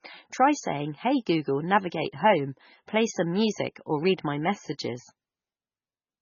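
Across the whole clip, the speech carries heavy coding damage, likely from MP3 compression. Nothing is heard above 7 kHz, so the top end is cut clean. Sibilants carry metallic chirps. The encoder was short of bits, which points to a very low rate of around 16 kbps. Weak frequency lines flick on and off between frames. That gives a watery, swirling texture behind the speech. Consonant attacks smear.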